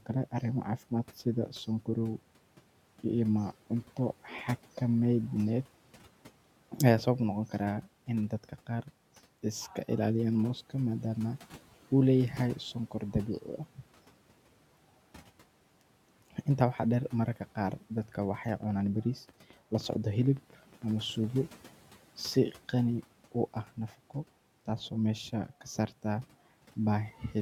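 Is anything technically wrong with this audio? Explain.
Yes, there's a train of clicks in the speech from 18.49 to 21.31 s, roughly twenty pops at about 7.8 per second, unevenly spaced and peaking around 5 dB above the speech. It's likely interference from nearby equipment or a faulty connection or power supply, and you hear it as ticking even in the pauses. The room noise sits about 24 dB under the speech.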